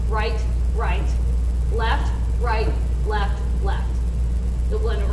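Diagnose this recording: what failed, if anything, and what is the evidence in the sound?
The failure is at the sample-rate conversion stage: the resampler was restarted on every block. Throughout the recording a buzz at 100 Hz rides under the sound, present only while signal is present. That rate points to 10 ms blocks, consistent with a 48 kHz to 24 kHz conversion. Because each block was filtered in isolation, the converter lacked neighbouring samples at block edges, leaving a small error at every boundary that repeats as a buzz.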